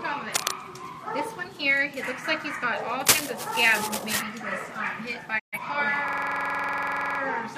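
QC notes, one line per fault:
0.34–0.53 s and 3.06–4.22 s, cable scratch noise: uneven bursts of scratching ride over the sound at about its own level. A worn contact being moved is the likely cause.
5.38–5.58 s, digital broadcast dropout: the sound fades out within 20 ms and leaves a 128 ms hole. Lost frames were muted, which fits about three frames.
6.08–7.20 s, system hang loop: a 46.44 ms slice repeats 24 times, giving a rapid 21.5 Hz stutter. This fits a frozen system replaying a 2048-sample buffer.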